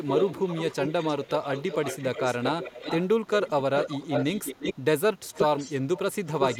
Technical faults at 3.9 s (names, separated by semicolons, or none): echo leak